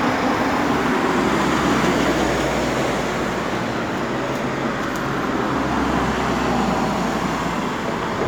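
No technical faults can be heard anywhere in this recording of sounds. Nothing in the audio breaks, drops out or changes unexpectedly at any point.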